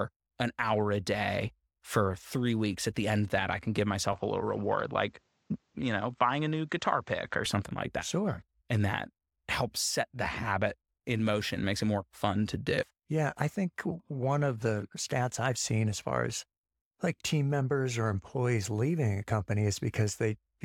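A speech recording where, from 4.13 to 7.46 s, the sound goes duller with nothing above 8.4 kHz and a faint new noise well below the voice, with no gap and no real level jump. That's likely the input switched to a poorer device, then back.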